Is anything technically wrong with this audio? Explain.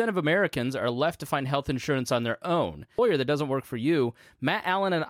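Yes. At 2.97 s the speech jumps abruptly forward with a brief blip, likely a stream segment skipped. The spectrogram shows a sudden vertical break, and the waveform shows a sharp step.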